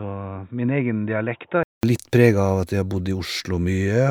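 From 0.0 to 1.83 s the speech is dull and boxy, with nothing above 3.8 kHz, roughly 10 dB quieter and carrying a faint new noise floor. A 0.2 s gap follows before full clarity returns. The likely cause is an input switched to a poorer device.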